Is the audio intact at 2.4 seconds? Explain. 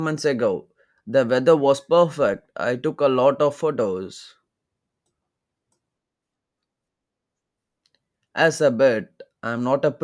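Yes, the audio is intact at 2.4 seconds, with no dropout, click, distortion or other technical fault at that moment.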